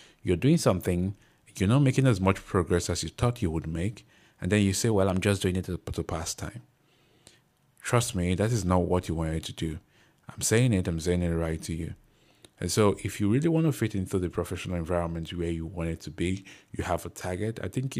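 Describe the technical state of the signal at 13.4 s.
At 13.4 s the speech signal is intact, with no technical fault audible at that moment.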